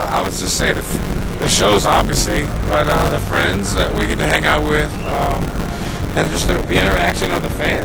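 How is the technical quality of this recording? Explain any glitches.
The recording has a technical fault: buffer tearing runs through the whole clip.

Buffer tearing, throughout: the program filling the playback ring buffer and the hardware draining it have drifted out of step, so their positions cross inside every period. Around 40 percent of each buffer therefore holds audio from roughly 20 ms earlier, joined to the current audio by abrupt edges on both sides. Those joins recur 100 times a second, which fits a buffer period of about 10 ms, and produce a steady robotic buzz at 100 Hz that sounds whenever there is signal and vanishes in silence.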